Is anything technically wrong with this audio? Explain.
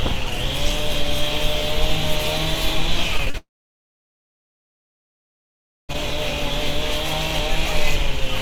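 Yes. There are two kinds of fault, close together.

Short concealed packet loss hits three times in quick succession: at 3.17 to 3.21 s, 3.25 to 3.28 s and 3.30 to 3.36 s. Chunks of about 20, 20 and 40 ms failed to arrive in time. The receiver patched each hole by extending the preceding sound, then blended back into real audio. Each one is heard as a brief smear or wobble.

Right after, from 3.38 s to 5.91 s, the sound cuts out for about 2.5 s. A short fading continuation of the last sound comes first. Then there is about 2.4 s of silence. The audio returns at 5.91 s, and the missing stretch is simply gone. The likely cause is a long network dropout, following the burst of short losses.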